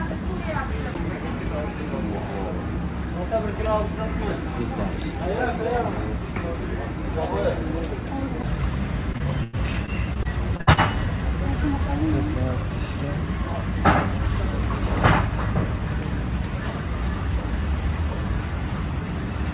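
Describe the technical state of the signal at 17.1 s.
At 17.1 s the signal is intact, with no dropout, glitch or distortion, only the steady narrowband sound of the call path, whose G.711 coding leaves nothing above 4 kHz.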